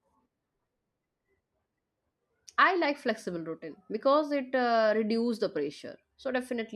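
No audible faults in it.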